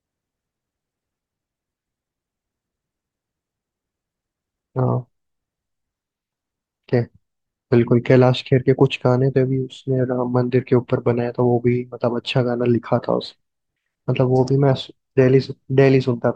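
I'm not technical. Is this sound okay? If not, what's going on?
No. From 13.13 to 14.03 s there is a drift correction step: software keeping two device clocks in line likely sped playback up by 6% in one jump. The speech briefly runs faster and about a semitone higher, then snaps back.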